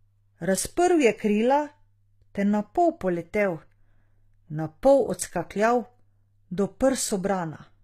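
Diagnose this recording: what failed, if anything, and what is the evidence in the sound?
The failure sits at the codec stage, and it runs the whole way through: the speech has a treble that's bright but synthetic, with s sounds coming out gritty and lispy, and nothing at all above 14.9 kHz. That points to HE-AAC compression, likely at a low rate near 20 kbps. The top band isn't coded directly but rebuilt by spectral band replication, copied up from lower bands and shaped coarsely, so its harmonics don't line up with the real ones.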